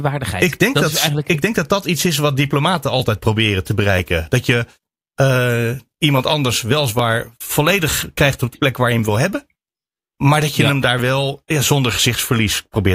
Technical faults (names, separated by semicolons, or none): periodic USB or driver dropouts